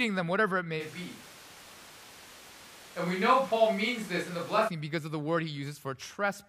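At 0.82 s the speech suddenly turns roomy and hollow, thinner in the low end, with background noise rising to around 20 dB below the voice, while loudness barely changes. At 4.67 s it snaps back to close, full sound. This is likely a switch to a distant microphone, the close mic's feed having dropped out. The abrupt change in both directions and the rising noise floor set it apart from added reverb or a simple bass cut.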